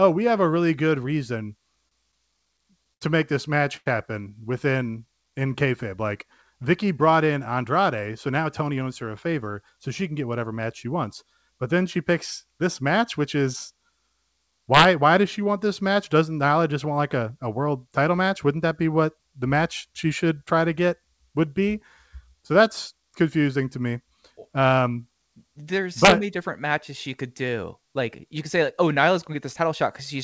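Speech heard through a wideband call path with nothing above 8 kHz, consistent with G.722, shows several delivery faults. Repeated stalls (stutter) from 1.76 to 3.04 s come from packets arriving late: nine times the jitter buffer ran dry, and the receiver held the last sound for 167 ms in total, the longest gap 72 ms, so the speech drags without losing anything. A short stall from a late packet at 3.77 to 3.89 s stretches one sound for 92 ms until the packet arrives. A jitter buffer slow-down from 4.78 to 5.54 s repeats pitch periods to rebuild reserve, adding 76 ms and playing at 91% speed with unchanged pitch. A jitter buffer speed-up from 7.51 to 9.73 s trims short pitch-period pieces, roughly 150 ms in all, so the speech runs hurried at 107%. Integer overflow at 14.74 to 14.85 s and 26.05 to 26.12 s produces violent cracks where loud peaks, driven about 2 and 3 dB past the limit, wrap to the opposite sign instead of clipping.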